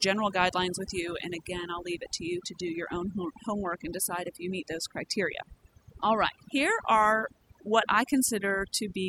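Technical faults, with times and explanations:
Throughout, overdone noise removal: a heavy-handed denoiser shuts off bands near its noise estimate, leaving near-silent gaps with twinkling specks.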